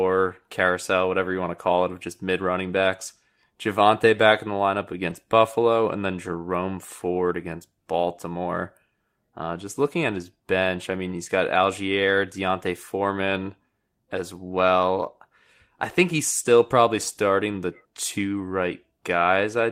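At 5.09 to 5.15 s the speech turns briefly rough and noisy with no gap, a lost packet rebuilt from error correction. About 40 ms, consistent with two 20 ms packets, was played from low-bitrate copies. The waveform stays continuous; the spectrogram shows grainier, smeared harmonics.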